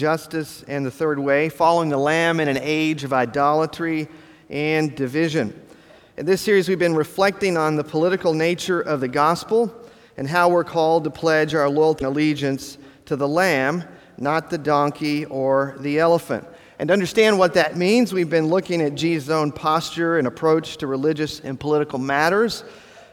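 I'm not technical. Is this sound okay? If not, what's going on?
No. At about 11.95 to 12.02 seconds there is a brief chirp or blip, caused by damaged data in a compressed stream. A bit of the file was corrupted, so the player briefly misread it and had to find its place again.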